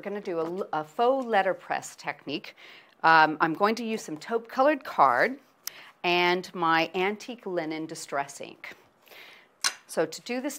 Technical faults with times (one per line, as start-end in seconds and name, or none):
2.28 compressed frames skipped
5.67 compressed frames skipped